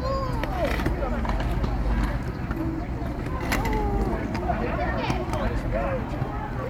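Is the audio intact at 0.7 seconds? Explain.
Yes, the audio is intact at 0.7 seconds, with no technical fault in the sound at that moment.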